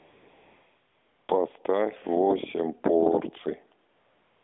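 A speech clip carried over a narrowband mobile link, with sound held between 250 Hz and 3.5 kHz. AMR comfort noise fills 0 to 1.28 s and 3.90 to 4.43 s. No speech frames were sent there. The receiver substituted smooth, steady synthetic hiss for the real background.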